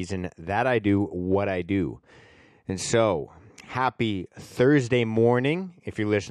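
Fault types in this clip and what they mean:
Nothing to list here, as no technical faults turn up anywhere in this speech recording.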